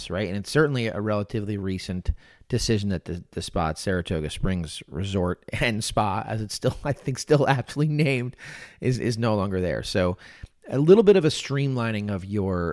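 No technical faults can be heard at any point in the recording.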